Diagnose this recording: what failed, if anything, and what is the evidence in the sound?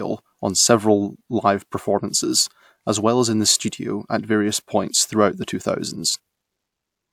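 Nothing failed anywhere in the recording chain.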